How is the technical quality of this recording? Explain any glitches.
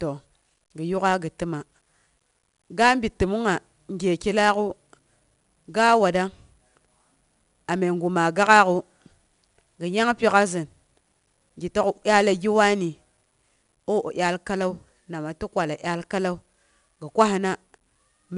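The recording has one fault, present for its whole length: 4-bit ADPCM compression. Each sample of the speech was stored as a coarse 4-bit step from a predicted value, with the step size adapting as it went. The quantisation error rides along with the signal level, so every louder stretch carries a plainly audible gritty hiss, and sharp onsets distort where the step cannot grow fast enough. Nothing reaches above about 10.6 kHz, which points to a sample rate near 22 kHz and leaves the speech dull.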